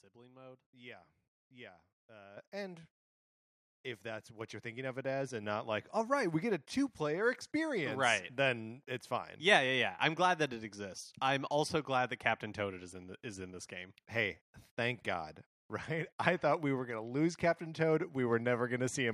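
At 2.37 s the microphone volume steps up by about 10 dB, then again at 4.41 s by about 5 dB, between "if that's" and "you're thinking of it". The input gain was raised in one jump each time, so the speech and background get louder together.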